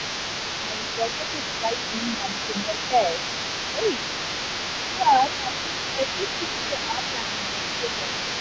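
From the start to the end, the other side's voice leaks through underneath the talker, roughly 10 dB below the speech. The echo canceller likely left part of the loudspeaker signal in the microphone feed.

Speech suppressed in double talk begins at the same time. The talker dips at 0 to 2.27 s, 2.66 to 3.01 s, 3.74 to 3.83 s, 4.96 to 5.49 s, 5.95 to 6.03 s and 6.69 to 8.09 s. With both sides talking at once, the echo canceller likely turned everything down. Most dips are shallow. The ones at 4.96 s and 6.69 s go deeper, to around 10 dB.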